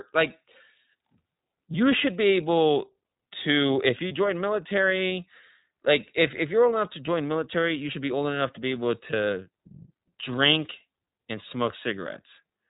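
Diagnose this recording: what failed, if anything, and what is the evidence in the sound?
The codec stage is where the damage starts. The whole clip runs through the iLBC codec, and you can hear it plainly: nothing above 4 kHz, so the speech is narrowband and boxy, with that slightly rough, synthetic edge you get when each frame's excitation is coded on its own rather than predicted from the last one. The texture fits iLBC's 30 ms mode at 13.33 kbps.

Then the network drops packets in two places, and these are lost iLBC frames. At 4.08 s and again at 7.91 s there's a short held, faintly buzzy vowel-like smear lasting about 30 ms, which fits a single missing frame each time. That's the decoder's concealment repeating the last pitch cycle with some noise mixed in. Since iLBC frames don't depend on their neighbours, the speech snaps back almost immediately after each gap.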